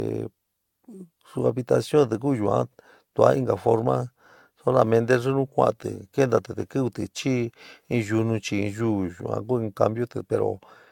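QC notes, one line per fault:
Throughout: generation loss, swirly, hollow speech with blurred attacks and nothing above 17 kHz, likely from around seven AAC re-encodes; more smeared than one 96 kbit/s pass.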